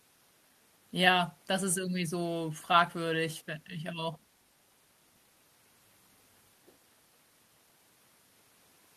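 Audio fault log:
No faults detected.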